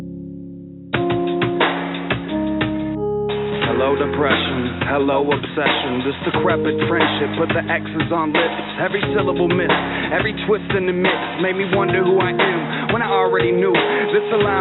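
Nothing in this clip stands out as a technical fault; there's nothing to flag anywhere along the way.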